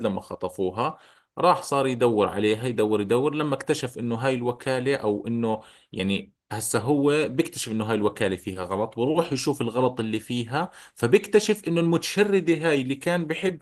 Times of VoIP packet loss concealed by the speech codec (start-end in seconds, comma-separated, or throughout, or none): none